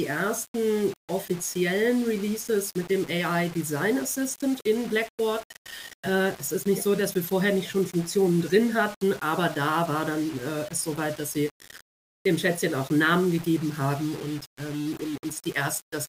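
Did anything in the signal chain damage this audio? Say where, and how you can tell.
Yes. A grainy distortion that rises and falls with the signal runs through the whole clip, with the quietest passages sputtering or dropping out instead of fading smoothly. That is the sound of low bit depth without dither, likely from a sample-format conversion that rounded to about 6 bits. The error sits only around 20 dB below the signal. On a waveform, quiet stretches show visible staircase steps. A spectrogram shows broadband hash that vanishes in silences.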